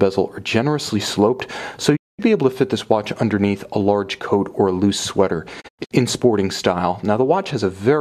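The audio has two digital broadcast dropouts. At 1.95–2.21 s it fades out over 20 ms into a clean 216 ms hole. At 5.60–5.93 s it stutters through several short gaps, the longest 96 ms. Each time the receiver muted on lost or corrupt frames, so that stretch of programme is gone.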